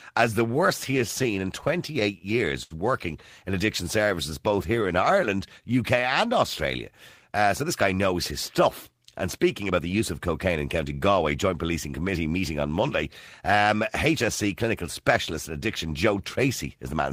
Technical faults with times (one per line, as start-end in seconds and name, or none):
0.91-2.73 repeated stalls (stutter)
4.05-5.72 jitter buffer slow-down
7.64-10.02 jitter buffer speed-up